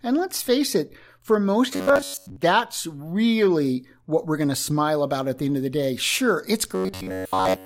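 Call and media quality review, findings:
Robotic sound from repeated short buffers, 1.73 to 2.36 s, after "face it for most", before "really what we're going". Metallic buzz at 93.8 Hz. Likely jitter buffer underrun, repeating a ~10.7 ms chunk over most of the stretch.

Same robotic buzz, 6.75 s to the end of the clip, at 93.8 Hz. Likely the same underrun, with repeated ~10.7 ms fills replacing most of the incoming speech.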